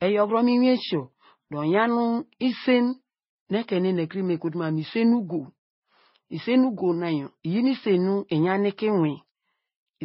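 Across the whole recording, the audio was likely passed through a low-rate MP3 encoder and then re-encoded to Vorbis, a case of transcoding between lossy codecs. The second encoder wastes its small budget reproducing the first one's damage while adding its own. Nothing survives above about 5.6 kHz, so the speech sounds muffled and dull, with swirly, warbling smear layered over grainy roughness, a combination that points to rates of about 23 kbit/s for the MP3 stage and 20 kbit/s for the Vorbis stage.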